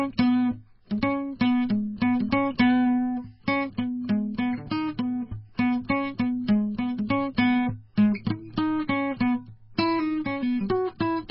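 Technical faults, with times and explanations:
Throughout: MP3 compression. The music has nothing above 5.6 kHz and a heavy watery, swirling texture, with smeared attacks and metallic chirps on bright transients. This is likely low-bitrate MP3 encoding, with the damage pointing to a rate around 16 kbps. Starved of bits, the encoder cuts the treble at a fixed frequency and zeroes weak frequency lines. Those lines then flicker on and off between frames, which produces the swirl.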